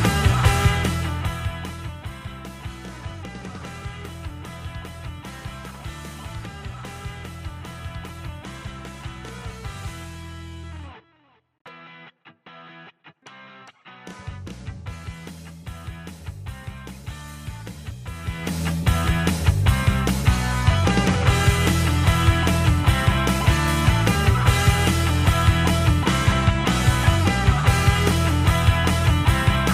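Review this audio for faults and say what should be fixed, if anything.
Nothing here needs fixing. The level holds steady throughout, with no turning down or back up.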